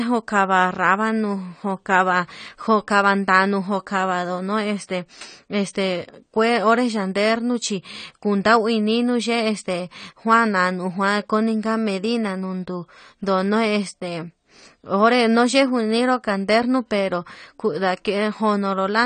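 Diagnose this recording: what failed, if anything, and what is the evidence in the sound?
Codec stage, throughout the speech: nothing above 9 kHz, and plainly audible codec damage, heard as a dull, smeared top end with fizzy, warbling sibilants. This is likely AAC compression, AAC-LC at a rate fitting about 32 kbps, too few bits forcing a low cut-off and coarse quantisation.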